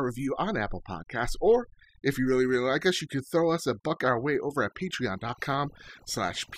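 Overdone noise removal runs throughout the speech: over-strong reduction switches off bands near the noise estimate, leaving twinkling near-silence and taking quiet parts of the voice with it.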